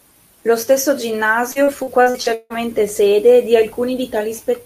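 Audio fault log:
1.51–2.53 s, repeated packet loss (robotic sound). The speech turns choppy. What sounds like about seven holes, the longest 155 ms, are each patched by repeating the last sound, so 38% of the stretch is filler. It clears before "sede di".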